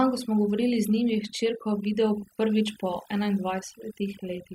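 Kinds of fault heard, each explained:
Overdone noise removal: a noise reduction stage set too aggressively runs through the whole speech clip, pulling individual frequency bands down to nothing wherever they sit close to its noise estimate. The pauses drop and break up into twinkling, chirpy specks, and the voice's quieter detail is stripped with the noise. Unlike a noise gate, which shuts everything at once, this works band by band, hence the glittering residue.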